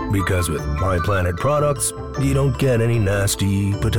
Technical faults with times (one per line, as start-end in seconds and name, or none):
none